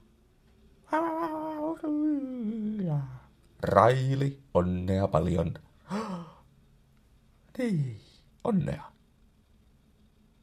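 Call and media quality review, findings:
Time-stretched section, 7.82 s to end of clip. Likely a time-scaling stage squeezing audio to fit a length, dropping short segments to preserve pitch; playback runs 1.37x. Pace jumps abruptly, pitch holds, sound turns rushed.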